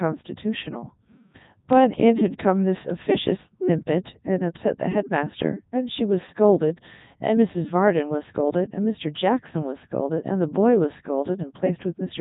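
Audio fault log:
Throughout: Codec 2 vocoder. The speech sounds robotic and buzzy because the decoder rebuilds it from sine waves driven only by pitch, voicing, energy and a coarse spectral envelope. The original waveform is discarded, and the damage is heavy, even at the top 3.2 kbit/s mode. A spectrogram shows a hard ceiling with nothing above 3.8 kHz and evenly spaced, overly regular harmonic stripes. The waveform looks smooth and periodic, with little fine texture.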